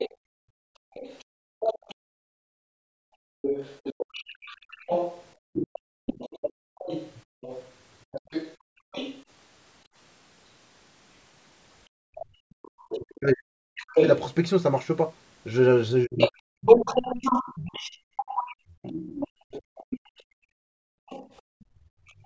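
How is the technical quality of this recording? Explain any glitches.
The recording has clear technical problems. They come from a speakerphone call with a struggling echo canceller.

Other side's voice leaking through: from 0.0 s to 22.24 s, a second voice sits under the talker. It runs roughly 10 dB below the main speech. The likely cause is the loudspeaker's sound reaching the microphone. The echo canceller did not remove all of it.

Background gated by the echo canceller: this happens from 0.11 s to 12.31 s, and again from 17.97 s to 22.25 s. While the far side plays, the canceller clamps the microphone hard. The room tone drops by up to about 33 dB, then returns. The first stretch adds up to around four seconds of dips, the second about two. It sounds like the background switching off and on.

Speech suppressed in double talk: from 12.59 s to 16.68 s, the talker's own voice is cut down. 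Pieces vanish, around two seconds in total. The drops reach roughly 40 dB. A brief cut of about 0.1 s also hits at 21.01 s to 21.11 s. Both sides were likely talking at once. The canceller could not tell its talker from the echo, so it turned everything down. The voice chops and fades mid-stream.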